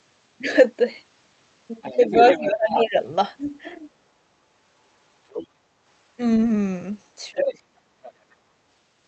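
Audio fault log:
1.82–2.89 s, 5.30–5.47 s, 7.46–7.51 s and 8.04–8.11 s: other side's voice leaking through. A second, fainter voice sits under the talker. It is about 10 dB down in the first and third stretches, about 15 dB down in the second, and about 25 dB down in the last. This is likely loudspeaker echo that the canceller left in the microphone.
1.97–2.96 s and 7.31–7.64 s: speech suppressed in double talk. The talker's level sinks while the far side plays on the loudspeaker. The drop is about 15 dB in the first stretch and about 20 dB in the second. The canceller likely could not separate its own talker from the echo, so it turned both down.
7.92–7.96 s: background gated by the echo canceller. The room sound drops by about 8 dB for about 40 ms, then comes back. The canceller clamped the microphone hard while the loudspeaker played and let go once it stopped. The call codec cuts off above 8 kHz throughout.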